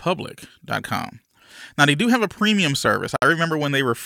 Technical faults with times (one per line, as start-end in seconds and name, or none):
3.16-3.22 gap at a join of encoded pieces